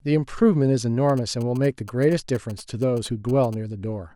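From 1.09 s to 3.55 s, a galloping dit-dit-dit of short 217 Hz buzzes runs under the speech, roughly 20 dB below it. These are GSM signalling bursts: a nearby 2G phone's brief radio transmissions, rectified by the audio circuitry into audible interference.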